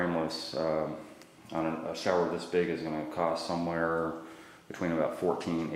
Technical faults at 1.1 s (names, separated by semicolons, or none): none